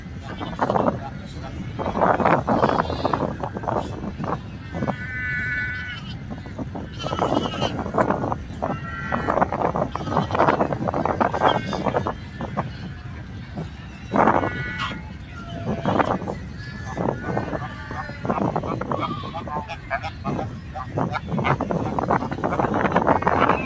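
Throughout, a speech-tuned noise suppressor applied to music or sounds pumps the level by roughly 10 dB, visible as a fluttering waveform envelope with sustained spectrogram bands thinning.

Sound cut by the noise suppressor at 0.00–0.26, 1.15–1.40, 4.38–4.74, 6.18–6.58, 12.71–14.09 and 15.10–15.37 s dips about 4 dB, leaving shallow envelope notches and truncated decays. The G.722 call path leaves nothing above 8 kHz.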